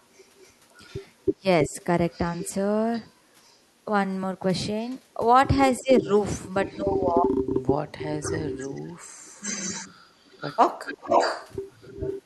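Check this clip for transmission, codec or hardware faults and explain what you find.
Two kinds of fault recur through the speech: a returning echo and short suppressions of the talker.

Echo leak at 0.15–2.49, 3.45–3.56, 4.85–4.91, 5.77–6.81 and 8.22–12.22 s. A delayed copy of the voice trails by about 320 to 370 ms, growing later in the clip. It is likely caused by a loudspeaker echo canceller on the other side letting residue back. The echo is faint at 3.45 and 4.85 s, about 35 to 40 dB down. Elsewhere it sits only about 10 to 15 dB below the speech.

Speech suppressed in double talk at 1.34–1.78, 5.8–6.08 and 6.77–7.78 s. When both sides overlap, the voice dips by about 15 dB in brief pieces. In the last span it drops by about 30 dB for nearly a second. This is likely the canceller muting the talker along with the echo.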